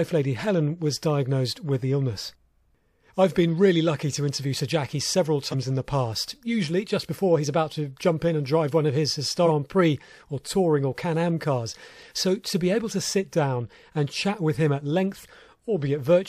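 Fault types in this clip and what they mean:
Compressed frames skipped: whole blocks of the coded speech never reach the output, so the sound leaps forward instead of pausing. At 5.51 to 5.55 s roughly 150 ms goes missing, and at 9.45 to 9.47 s roughly 300 ms. These jumps fit about three and about seven frames of 46.4 ms. Unlike a dropout, no silent gap appears.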